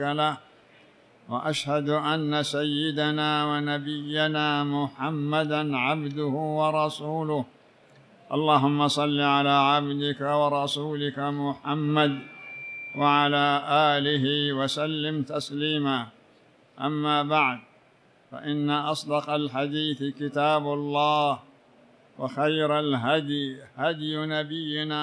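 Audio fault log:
No faults can be heard anywhere in the audio. There is nothing here to enter in the log.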